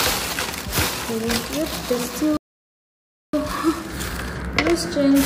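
At 2.37 s the sound cuts to silence for about 0.96 s, until 3.33 s: a playback stall, likely the player running out of data.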